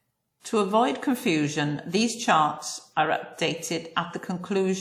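From 0.40 to 0.45 s, pre-echo: codec noise spreads about 47 ms ahead of a sharp onset, heard as brief hiss, seen as a faint broadband smear before the attack.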